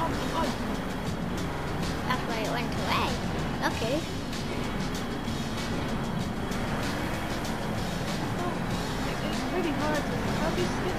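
At 1.51 s a repeated frames fault begins: the same 46.4 ms slice of audio plays three extra times, ending at 1.65 s. This produces a brief stutter and adds about 139 ms to the audio, which fits a single compressed frame being duplicated.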